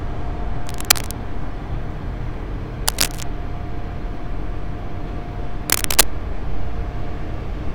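Bursts of cable scratch noise occur from 0.67 to 1.14 s, 2.88 to 3.23 s and 5.68 to 6.06 s: dense, uneven scratching and rustling, about as loud as the sound, louder in the last burst. A worn cable or connector being moved is the likely cause.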